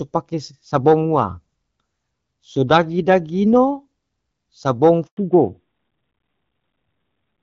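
A speech recording on a phone call that starts on AMR wideband (HD Voice), with clean, light coding that fits roughly the 12.65 kbit/s mode. At 5.07 s a handover gap cuts the audio to silence for 100 ms, until 5.17 s. The sound fades within a few tens of milliseconds rather than clicking or stuttering, which separates a network switch with no frames arriving from packet loss or concealment glitches. From 5.17 s to the end, a fallback to narrowband removes everything above 4 kHz, so the sound turns duller and rougher, which points to AMR narrowband at about 12.2 kbit/s. It is a sudden, lasting step in bandwidth, not a gradual filtering or a brief dropout.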